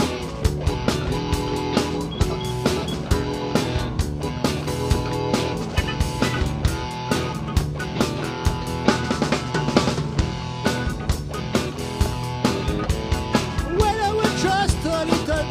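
Nothing stood out on listening; no technical fault could be heard anywhere in the clip.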